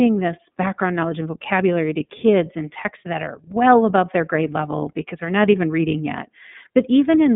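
Throughout the clip the speech has passed through the iLBC codec, a narrowband VoIP coder working on 30 ms frames, each coded on its own without reference to the last, at a rate that fits 13.33 kbps. The line band runs from 150 Hz to 3.6 kHz and nothing survives above 3.8 kHz, so sibilants lose their edge. The coding damage is plainly audible: the voice sounds thin, slightly rough and synthetic.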